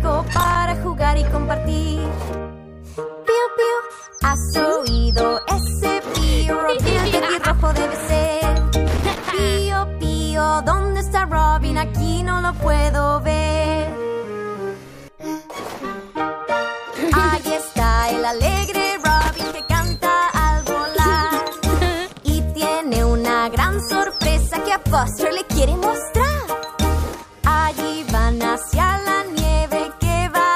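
Right at the top, from 0.33 to 0.56 s, there's a burst of loose connector crackle, and it comes back at 8.97 to 9.30 s and 19.21 to 19.55 s. A worn or dirty contact is flickering open and shut, chopping the sound into an irregular scratchy crackle.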